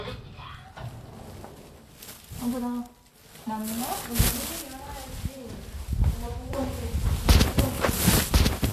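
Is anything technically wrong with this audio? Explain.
Yes. Vorbis compression, throughout: hiss and graininess, roughened tones, smeared attacks and nothing above 14.2 kHz, likely from low-quality Vorbis coding, consistent with roughly 36 kbps, where coarsely quantised treble turns to noise.

Doubled audio track, from 6.67 s to the end: a dry, full-band second copy enters abruptly, about a second behind and roughly as loud, likely from a slower capture path mixing the sound in again.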